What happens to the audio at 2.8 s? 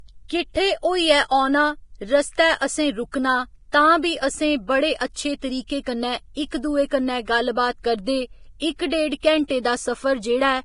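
At 2.8 s the speech carries the same damage heard from start to end, most likely Vorbis compression at a low bitrate near 30 kbps. Nothing remains above 10.6 kHz. The remaining treble is quantised so coarsely that detail turns to hiss, leaving grainy tones and smeared consonant attacks.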